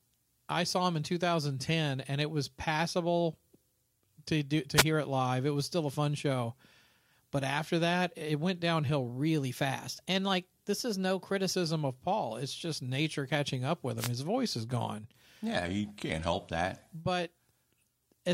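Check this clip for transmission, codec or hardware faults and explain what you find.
Yes, there are faults of two kinds: two wireless microphone noise hits and two sudden speed-and-pitch steps that are most likely drift correction steps.

Wireless microphone noise hits occur at 4.75 to 4.84 s and 13.97 to 14.11 s. The analogue FM radio link faded as reflections cancelled, letting receiver noise rise over the speech. Each is heard as a brief swish of static and shows as a short vertical band of broadband noise on a spectrogram.

From 9.10 to 11.53 s, playback runs 5.83% fast and pitch rises about 98 cents, roughly a semitone. From 15.65 to 16.33 s it runs 5.83% slow, about 104 cents lower. This is likely a drift correction step, where clock-matching software abruptly changed the playback rate to manage its buffer. On a spectrogram the harmonic stack jumps up or down at each boundary and shifts back when the section ends.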